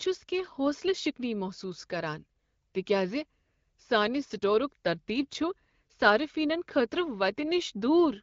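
No technical faults can be heard anywhere in the speech. It comes through an AMR wideband (HD Voice) path at 12.65 kbit/s, which limits the top end to about 7 kHz and leaves only light coding texture.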